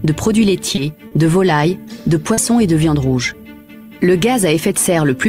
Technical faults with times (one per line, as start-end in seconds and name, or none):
0.75-0.79 short concealed packet loss
1.07-1.13 short concealed packet loss
2.33-2.39 short concealed packet loss